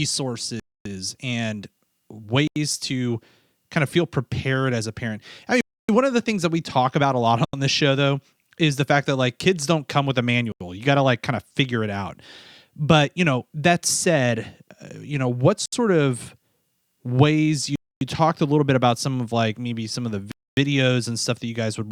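Eight times, blocks of samples in the speech were replaced by zeros, producing a block of digital silence each time: 0.60 to 0.85 s (256 ms), 2.48 to 2.56 s (85 ms), 5.61 to 5.89 s (280 ms), 7.45 to 7.53 s (85 ms), 10.52 to 10.61 s (85 ms), 15.66 to 15.73 s (68 ms), 17.76 to 18.01 s (256 ms), and 20.32 to 20.57 s (256 ms). The recurring 85 ms gaps fit a 4096-sample buffer. The audio drops abruptly to dead silence and returns with no fade. The shorter gaps sound like quick holes, and the 256 to 280 ms ones like clear dropouts.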